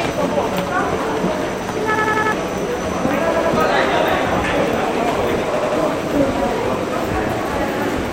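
This is a recording of sounds with repeated-buffer stutters. At 1.95 to 2.32 s, a 93 ms piece plays four extra times, dropping about 0.4 s of audio. At 3.34 to 3.53 s and 5.57 to 5.76 s, it repeats twice. The length fits a 4096-sample buffer replayed when new audio arrived late.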